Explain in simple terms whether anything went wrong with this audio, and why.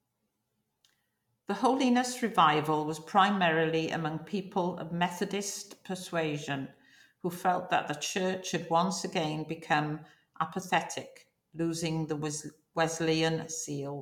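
Nothing went wrong here: the speech comes through without any audible technical fault.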